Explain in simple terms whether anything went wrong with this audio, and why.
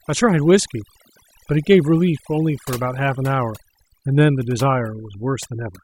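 Overdone noise removal runs through the whole clip, start to finish. A noise-cleaning tool was pushed too hard, so it shuts off any frequency band that seems close to background hiss. The gaps drop and break up into twinkling specks, and the speech loses its softer parts too.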